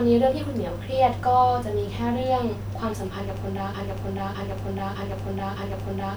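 From 3.74 s to the end, the speech falls into a broken-record loop. A segment of about 0.61 s plays again and again, back to back, four times over, and the sound that should have come next never arrives. The likely cause is a stall in the player, encoder or stream that kept resending the last fragment it held. On a waveform and spectrogram, identical 0.61 s blocks tile the final 2.4 s.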